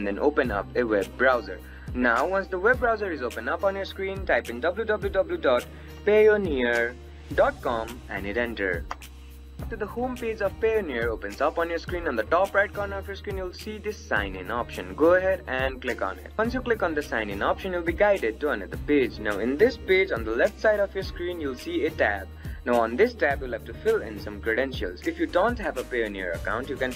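Switching supply whistle throughout: a high tone drifting between 3.88 and 3.98 kHz, about 45 dB below the signal, from a power supply in audible burst mode or beating with another.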